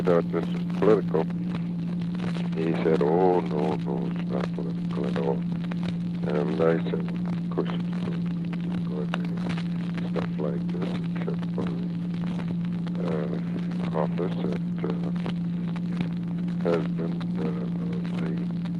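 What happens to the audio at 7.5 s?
Nothing goes wrong at 7.5 s: the audio passes through intact, carrying only the steady band-limited character of the call codec it travels through.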